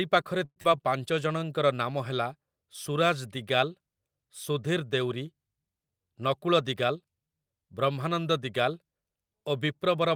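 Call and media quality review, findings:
Long network dropout, 0.45 to 0.66 s. Sound smears into a fading buzz or hiss, then about 40 ms of silence. Probable component: network path, likely a packet loss burst. Receiver concealment filled the gap. Roughly 80 ms never recovered. Buffer delay grew about 40 ms.

Jitter buffer slow-down, 0.70 to 1.40 s, right after the dropout. Audio drawn out, pitch unchanged, playing near 89% speed. Probable component: adaptive jitter buffer rebuilding its reserve. Repeated pitch periods added about 81 ms.

Jitter buffer speed-up, 5.91 to 7.05 s. Audio hurried, pitch unchanged, playing near 110% speed. Probable component: jitter buffer draining excess delay, as after late packets arrive together. Short pitch-period chunks cut out, about 150 ms in total.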